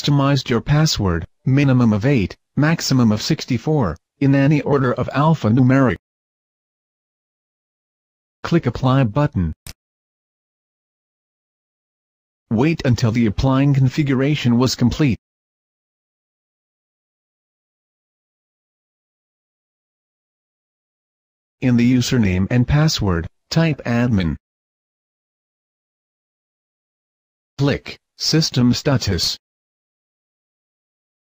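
No technical faults are audible.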